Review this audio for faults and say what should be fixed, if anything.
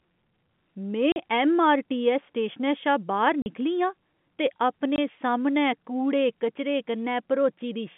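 Packet loss filled with silence cuts the speech at 1.12 to 1.16 s (40 ms, just before "ऐम्मआरटीऐस्स स्टेशनै शा"), 3.42 to 3.46 s (40 ms) and 4.96 to 4.98 s (20 ms, before "सामनै कूड़े कचरे"). The gaps fit 20 ms packets. Lost packets were replaced by silence, so the waveform drops flat with abrupt edges, and the spectrogram shows blank vertical strips. Turning on packet loss concealment in the receiver, backed by a jitter buffer or forward error correction, would cover these holes instead of playing silence.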